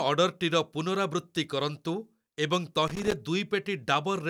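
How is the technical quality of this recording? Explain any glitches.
There is one glitch in this speech recording. From 2.87 to 3.13 s, about a quarter of a second, there is loose connector crackle. A worn or dirty contact in the signal path is shifting. It makes and breaks contact many times in quick succession. Each break chops the signal. Any DC present on the line turns those breaks into pops. The result is an irregular, scratchy burst of crackle over the speech.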